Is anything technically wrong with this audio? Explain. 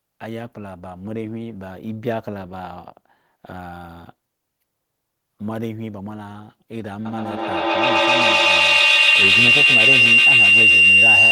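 Yes. A feedback howl starts at 7.05 s and continues to the end of the clip at 11.32 s. A microphone is picking up a loudspeaker carrying the same call, and each pass around that loop comes back louder than it went in. The returns pile up and narrow onto the frequency the loop favours, here around 3 kHz, which becomes a piercing tone. It pulses at roughly a tenth of a second, the loop's round-trip delay, and peaks about 14 dB above the speech.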